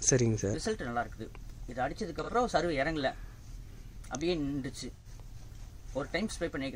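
A brief smeared, noisy patch at 2.23 to 2.30 s, about 43 ms long, and a longer phasey smear at 4.96 to 5.07 s, about 85 ms, come from AAC frame loss with concealment, where the decoder rebuilt the gaps from the last good spectrum. The lengths point to one lost frame, then two.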